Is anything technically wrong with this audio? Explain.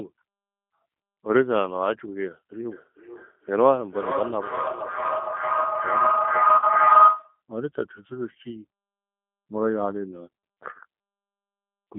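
Yes, a few things. The whole clip of speech runs through the G.729 codec at 8 kbit/s, with the line band sitting roughly 200 Hz to 3.6 kHz. That codec rebuilds each 10 ms frame from a vocal tract filter, a pitch guess and a handful of pulses, so nothing up top survives and the speech comes out intelligible but noticeably rough and a bit synthetic. Here the damage is plainly audible, not subtle.

From 2.71 to 7.41 s there's a feedback howl. Two devices in the same room are sharing the call, so sound loops from a loudspeaker into a microphone and back, gaining level each lap. Instead of dying away, the repeats pile up and narrow to a tone somewhere around 1.5 kHz, with a loop delay of roughly 400 ms, and at its worst it sits about 7 dB above the speech.

Right inside that howl, at 6.58 to 6.65 s, there's VoIP packet loss concealed by the speech codec. About 40 ms went missing, which fits four lost frames, and the decoder papered over the gap by extrapolating its last pitch and filter while turning the gain down. 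You get a short, fading stretch of the sound, and because each frame leans on the one before, the audio stays weak or distorted after packets resume.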